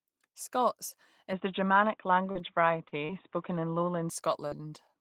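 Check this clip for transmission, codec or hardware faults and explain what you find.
Two faults are audible: an input device change and short concealed packet losses.

From 1.33 s to 4.10 s, the sound turns dull and boxy. Nothing above 3.8 kHz survives, the level shifts by a few decibels, and faint new noise appears. This is likely an input switched to a poorer device.

Short concealed packet loss occurs at 2.31, 2.88, 3.05 and 4.48 s. Each time about 40 ms of audio goes missing, and the receiver extends the preceding sound for roughly 35 ms to cover the gap. Each one is heard as a brief smear or wobble. At 4.48 s there is also a slight stretch.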